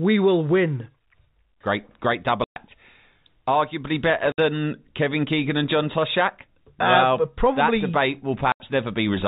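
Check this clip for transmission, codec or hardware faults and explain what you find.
Three dropouts from packet loss filled with silence interrupt the speech, carried over what sounds like G.711 telephone coding with its cut-off at 4 kHz. The holes run from 2.44 to 2.56 s (120 ms), 4.32 to 4.38 s (60 ms) and 8.52 to 8.60 s (80 ms). Each length is a multiple of 20 ms, which fits 20 ms packets going missing and the receiver inserting zeros instead of concealing them. The audio stops dead and restarts abruptly at each edge. On a waveform these show as flat lines with abrupt cliffs, and on a spectrogram as blank vertical bands.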